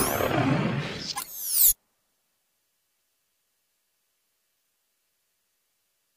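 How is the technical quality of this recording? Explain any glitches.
There is one glitch, a single click at 1.58 s. It sounds like dropped samples. A couple of samples, a tiny fraction of a millisecond, likely went missing from the stream at that point. The waveform then jumps straight from one value to a later one. That step is far too brief to remove any audible sound. It comes through as one sharp, isolated tick. In a spectrogram it would show as a thin vertical line.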